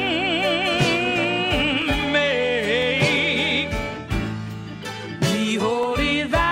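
From 0.81 to 5.83 s, periodic USB or driver dropouts leave about seven millisecond-long silent gaps exactly 1.0 s apart, heard as ticks whose regular spacing rules out random clicks.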